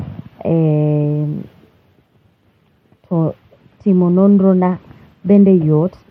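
At about 3.54 s the Bluetooth link appears to come under pressure and the sending device cuts the SBC bit pool, a Bluetooth SBC bit pool drop, to something like 13 from a normal 31, which would put the stream near 94 kbps. Starved of bits, the encoder leaves the highest sub-bands nearly empty and quantises the rest coarsely. The speech turns dull and muffled, with a gritty, rough noise riding on it, until clarity returns at 5.41 s.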